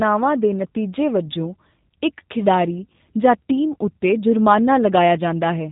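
From start to finish, the speech carries G.729 codec damage, and it is plainly audible. The codec rebuilds each 10 ms frame from a vocal tract model, a pitch predictor and a few coded pulses. The fine detail of the real waveform is lost. Nothing above 4 kHz survives, so the sound is dull and boxy. The speech is rough and slightly synthetic, which fits an 8 kbit/s G.729A stream.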